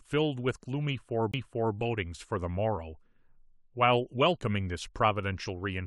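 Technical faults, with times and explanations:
1.32 to 1.34 s: CD skip. A small tick and a brief mute of roughly 20 ms, after which the speech continues from a different point. A knock or a flaw on the disc made the laser jump to another turn of the spiral.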